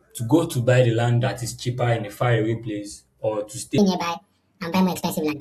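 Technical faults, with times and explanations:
3.78–5.41 s, section at the wrong speed: the speech suddenly runs 1.57 times fast and rises about seven semitones, likely from playback against the wrong clock. On a spectrogram, harmonics and formants jump upward and spread apart; on the waveform, syllables compress abruptly.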